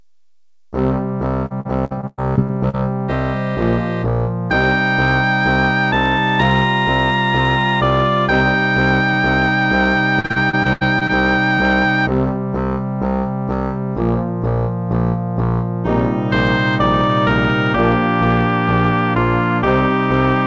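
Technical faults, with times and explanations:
1.46–2.75 s: repeated packet loss (robotic sound). Eight gaps, the longest about 110 ms, leave roughly a quarter of this stretch patched by stretching the previous sound forward, so the audio turns choppy, with holes following one another in quick succession.
10.20–11.11 s: repeated packet loss (robotic sound). Again eight gaps, the longest 80 ms, with about a third of the span concealed by repeating the last sound; the rapid succession of patched holes gives the same chopped, robotic texture. The call codec's band limit leaves nothing above 8 kHz.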